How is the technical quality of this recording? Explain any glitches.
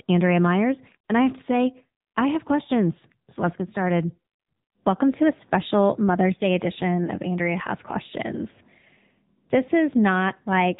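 The speech has a thin, boxy, telephone-like sound throughout, with plainly audible buzzy, synthetic edges. That is the AMR narrowband mobile codec: nothing passes above about 3.8 kHz, and the vocal-tract model rebuilding each 20 ms frame from sparse pulses sounds like a low-bitrate mode, around 8 kbps.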